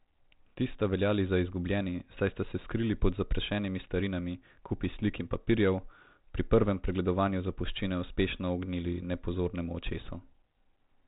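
No technical fault is audible in this speech; it passes through 32 kbit/s G.726 telephone coding as expected for that path, with its usual 4 kHz ceiling.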